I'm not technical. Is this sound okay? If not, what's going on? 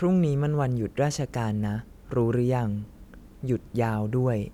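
Yes, no faults heard.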